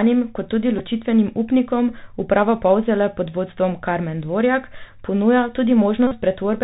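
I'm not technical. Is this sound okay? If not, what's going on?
No. Two things are wrong, both from a Bluetooth headset link.

The first is the Bluetooth CVSD headset codec, used for the whole recording. This old headset method squeezes speech into a narrow channel by tracking the waveform in tiny up-or-down steps, and it throws away everything above 4 kHz. Here the damage is plainly audible: the speech sounds muffled and phone-like, s sounds come out scratchy, and a grainy hiss sits underneath throughout.

The second is a Bluetooth headset packet repeated, heard twice. When small chunks of audio fail to arrive, the headset replays the last good chunk instead of leaving silence. At 0.78 s this lasts only about a hundredth of a second and is heard as a very brief buzz. From 6.07 to 6.14 s a longer run of lost chunks, about 40 milliseconds' worth, produces a short, steady buzz until clean audio returns.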